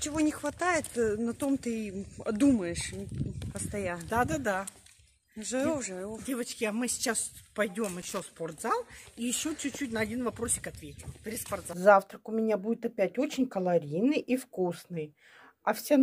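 At about 8.02 s there's a short burst of loose connector crackle, lasting until around 8.22 s. A worn or dirty contact is making and breaking as it shifts, chopping the signal for that fifth of a second, so you get an irregular, scratchy crackle across the sound.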